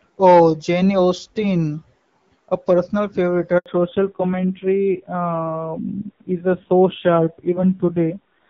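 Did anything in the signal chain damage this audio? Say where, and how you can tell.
Yes. A handover gap at the network stage: no frames arrived during a network switch, so the speech drops to silence for 80 ms at 3.58 s, just after "personal favorite".

A fallback to narrowband at the codec stage: from 3.66 s to the end the call leaves HD Voice, nothing remains above 4 kHz, and the speech turns dull and rough, pointing to low-rate AMR-NB.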